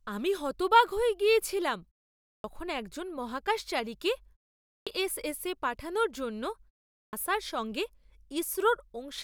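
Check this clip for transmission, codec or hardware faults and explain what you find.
There is one recurring fault: a clipped start after a pause, heard three times in this speech. At 2.26 to 2.44 s, 4.67 to 4.87 s and 6.96 to 7.13 s, about 180, 200 and 170 ms are lost after pauses of 0.43, 0.39 and 0.34 s. The output path sleeps during short silences and needs time to wake, so speech resumes abruptly without its opening sounds. On a waveform, each pause ends in a hard vertical onset with no gradual rise. On a spectrogram, the first column of energy appears at full level with no leading consonant or attack, while the pauses themselves stay cleanly silent.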